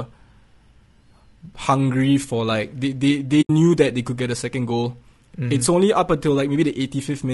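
A speech recording, likely encoded throughout with low-delay AAC compression of the AAC-ELD kind used for video calls, at a rate that sounds like roughly 32 kbps. Its short frames resolve the voice's pitch harmonics poorly, so the speech comes out rough and grainy, with noise filling the gaps between harmonics. AAC frame loss with muting occurs from 3.41 to 3.50 s: the decoder zeroed the missing frames, and the overlapping windows fade the sound out and back in, leaving a soft-edged silent hole of about 80 ms that fits four lost frames.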